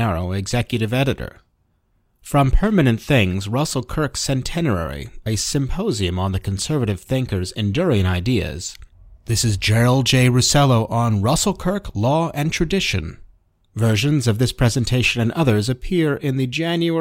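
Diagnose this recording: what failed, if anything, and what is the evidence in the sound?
Nothing in the speech stood out as a fault on listening.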